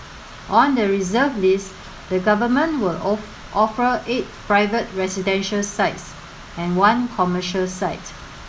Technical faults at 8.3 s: none

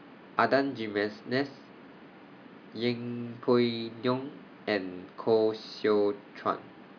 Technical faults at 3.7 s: none

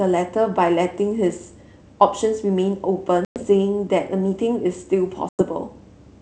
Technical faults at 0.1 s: none

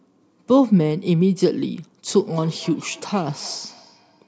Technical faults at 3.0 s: feedback echo between two devices

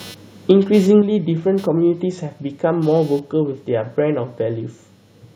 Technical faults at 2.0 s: computer activity noise; microphone volume stepped down

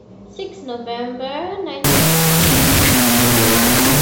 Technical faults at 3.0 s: wrong sample width

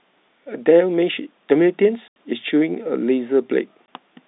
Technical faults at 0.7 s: none

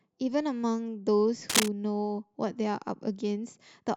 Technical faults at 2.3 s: none

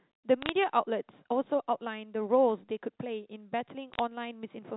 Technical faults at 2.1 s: none

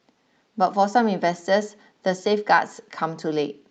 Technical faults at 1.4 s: none

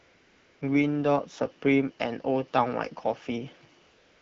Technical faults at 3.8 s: AMR comfort noise

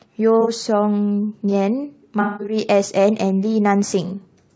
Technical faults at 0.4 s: low-delay AAC compression; AAC frame loss with concealment

